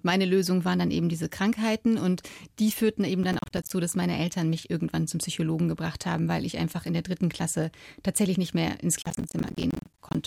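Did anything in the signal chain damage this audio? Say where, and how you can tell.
Yes, processor overload crackle at the driver or buffer stage, from 3.24 to 3.72 s and again from 9.02 to 10.15 s. The processor missed run after run of short buffers, around 10 ms each, and each miss became a hard-edged silent gap. The first burst holds about twenty such gaps; the second, longer one holds dozens. The speech sounds gritty and torn. A waveform shows a comb of flat dropouts, and a spectrogram shows vertical broadband streaks.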